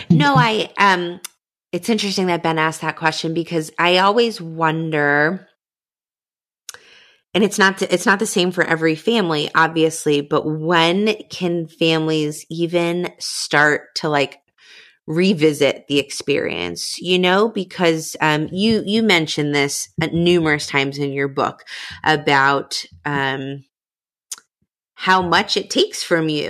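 A burst of gritty crackle tears through this speech recording from 6.85 to 7.40 s, ending just before "it's not it's not". This is processor overload crackle: the processor fell behind and missed a handful of deadlines for very short audio buffers, each about a millisecond and a half. Every missed buffer was filled with a stale fragment of earlier audio, and the hard edges of those repeated slivers combine into the rough, tearing texture until the load eases.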